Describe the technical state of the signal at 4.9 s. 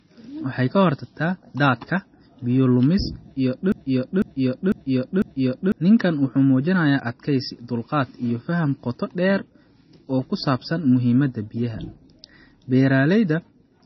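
At 4.9 s the sound is inside a broken-record loop running from 3.72 to 5.72 s. A half-second fragment repeats exactly, back to back, four times. A stalled player or stream likely kept resending its last buffer. The audio due in that stretch is lost.

MP3 compression also affects this moment and the whole clip. Nothing survives above 5.9 kHz, so the speech sounds dull and band-limited. Weak frequency components flicker between frames, giving a watery, swirly texture and metallic chirps on s sounds. The heavy damage likely comes from a very low bitrate, around 24 kbps.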